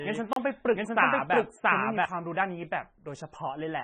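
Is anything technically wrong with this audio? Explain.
Yes. Three faults can be heard.

MP3 compression runs through the whole clip, and the damage is heavy. Nothing is present above 9.3 kHz, which points to the encoder's fixed treble cut. The sound fits a very low bitrate, around 17.5 kbps. At that rate the encoder lacks bits, so it drops weak frequency lines. Those lines flicker on and off between frames. The speech sounds watery and swirly. S sounds turn metallic, and attacks smear.

A doubled audio track is already under way when the clip starts and runs to 2.05 s. A second full-band copy of the speech follows about 0.7 s behind. It is about as loud as the original. It has no added decay or room colour. The likely cause is a second capture through a slower path, or an edit that left two copies out of step. The copy stops abruptly at 2.05 s.

A block of digital silence falls at 0.33 s and lasts until 0.36 s. 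The gap is 32 ms long. Zeros replace the audio there, so the sound cuts out and returns with no fade. At this length it is heard as a short hole, not a tick. This can happen when the program fails to fill its output buffer in time. It can also happen when a calculation produces invalid numbers.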